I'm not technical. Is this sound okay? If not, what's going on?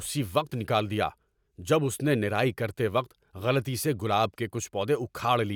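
Yes, nothing stood out as a problem when listening to this speech recording.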